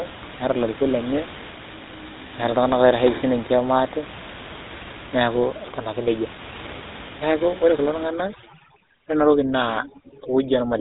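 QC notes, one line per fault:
Throughout: GSM full-rate codec. The speech has a plainly audible buzzy, gravelly grain, and nothing comes through above about 3.8 kHz, so it sounds boxed-in and dull up top. That fits the old 13 kbps GSM coder, which models the throat and mouth as a filter and drives it with a sparse, evenly spaced pulse train instead of the real excitation. That thin excitation is where the rasp comes from.
8.07 to 10.81 s: overdone noise removal. Over this last stretch the room noise, which until then sits about 15 dB under the speech, drops away with little twinkly specks left behind. A denoiser pushed too hard is shutting off individual frequency bands whenever they dip near its noise estimate, and the quieter bits of the speech are being cut along with the noise.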